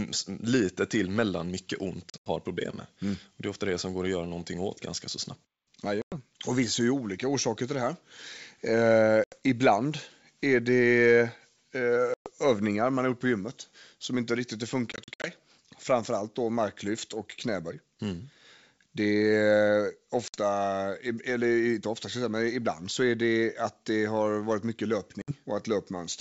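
Hard-edged silent gaps break the speech at 2.10 to 2.29, 6.02 to 6.16, 9.24 to 9.36, 12.14 to 12.30, 14.92 to 15.31, 20.28 to 20.38 and 25.22 to 25.32 s. Each time, the speech returns slightly distorted, settling within tens of milliseconds. This is packet loss on an ADPCM call. Lost packets, between 60 and 160 ms per event, were replaced by silence. The first and fifth events are scattered bursts. That loss knocked the receiver's adaptive predictor and step size out of step with the sender's until they caught up.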